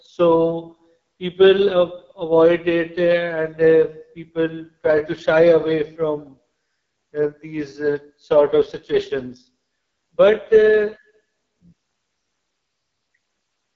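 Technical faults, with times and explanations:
Throughout: AMR wideband (HD Voice) codec. The speech is rough and raspy, with a buzzy, gritty edge, which points to the lowest AMR-WB mode, near 6.6 kbit/s. At that rate the pulse-driven vocal tract model gets too few bits to track the voice closely, so detail smears and harshness creeps in. Above 6.4 kHz the band is filled with shaped noise. On a spectrogram, energy stops sharply at about 7.2 kHz, harmonics look blurred, and the top strip appears as a diffuse haze.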